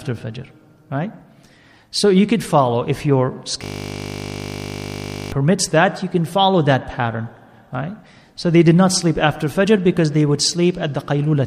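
There's a system hang loop in this audio from 3.64 to 5.32 s. The machine or its driver stalled while the sound hardware kept replaying the same 20 ms slice of its ring buffer, dozens of times over. Because the loop is so short, you don't hear a stutter. It fuses into a steady buzz at 50 Hz, which fits a buffer of about 20 ms. Roughly a second and a half of the real audio never made it out.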